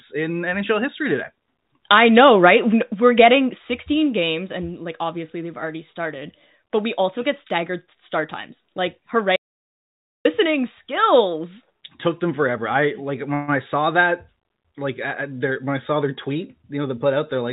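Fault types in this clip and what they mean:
audio dropout to silence: From 9.36 to 10.25 s the sound stops dead for about 0.89 s. The gap is silent with no room tone underneath, and whatever happened in that stretch is simply gone. The input feeding the recorder was likely lost, and silence was written in its place. A call freeze would fill its gap with a fading continuation, and nothing would be lost.
call audio freeze: Between "forever I like when" and "I saw that like", at 13.34 to 13.50 s, the last sound is drawn out for 138 ms instead of going quiet, and then the audio resumes where it paused. Nothing is missing. The only effect is 138 ms of extra delay. Packets were likely held up until the jitter buffer ran dry. Unlike the dropout, this gap is filled with sound and nothing is skipped.
jitter buffer speed-up: After "I saw that like", from 15.40 to 17.43 s, the audio runs at about 106% speed and sounds slightly hurried. 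Around 150 ms is trimmed away in many tiny pitch-period-sized cuts as the receiver works off excess buffered delay. The pitch stays where it was. That sets it apart from a plain playback-rate change, which would raise the pitch along with the tempo, all within the 4 kHz narrowband sound of the G.711 call path.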